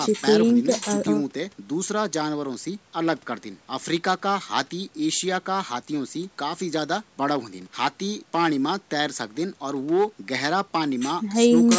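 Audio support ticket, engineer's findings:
No fault found: the speech passes through the call's microphone processing as expected, with the lowest bass trimmed by its high-pass filter and nothing heard above 8 kHz, both normal for that path.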